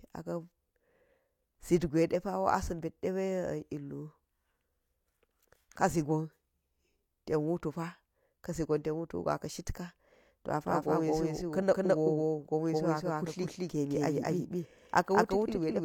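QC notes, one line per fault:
10.65 s to end: doubled audio track. From 10.65 s a second, full-band copy of the speech runs roughly a fifth of a second behind the original at about the same level. It cuts in abruptly and carries no decay or room colour. The likely cause is a second capture through a slower path or an edit holding two offset copies. On a spectrogram each syllable's pattern repeats, shifted right; the waveform shows every onset echoed.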